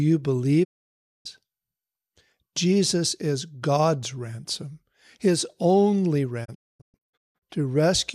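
Speech that drops to silence twice: at 0.63 s it fades out over about 20 ms and stays muted until 1.27 s, and just after "ransom his only" it breaks into several short holes between 6.44 and 7.44 s, the longest about 240 ms. This is a digital broadcast dropout. The receiver muted while frames were missing or corrupt, losing about 0.6 s and then 0.67 s of programme, which fits runs of roughly 24 ms frames.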